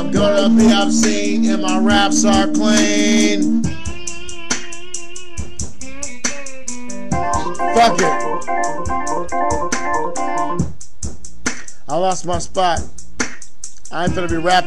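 No technical faults are audible anywhere in the sound.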